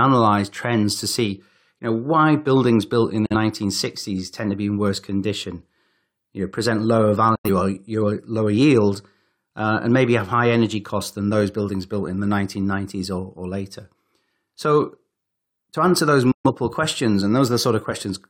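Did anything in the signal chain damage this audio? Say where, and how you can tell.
Yes. The damage happened at the reception and decoding stage: it's a digital broadcast dropout. The speech mutes three times, at 3.26 to 3.35 s, 7.35 to 7.50 s and 16.31 to 16.50 s, each with a quick fade of about 8 ms rather than a hard click. The gaps grow in steps of roughly 43 ms, which points to one, two and then three bad frames. The receiver muted until clean frames arrived, so whatever was sent during those holes is gone.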